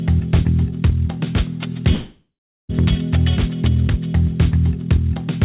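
From 1.94 to 2.72 s, likely a long network dropout: a fading buzz gives way to silence, and the sound returns with a section skipped, not merely smeared.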